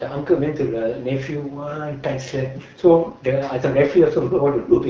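From start to finish the speech carries AMR wideband (HD Voice) codec damage, and it is plainly audible. Voiced sounds come out rough and raspy because the pulse-driven vocal tract model has too few bits to follow the voice closely, which fits one of the lowest modes, around 8.85 kbit/s. Unlike narrowband telephone coding, the sound keeps its air up to about 7 kHz, with the band above 6.4 kHz filled by hissy shaped noise.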